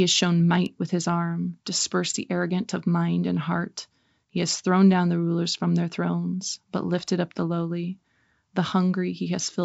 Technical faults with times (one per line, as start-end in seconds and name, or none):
none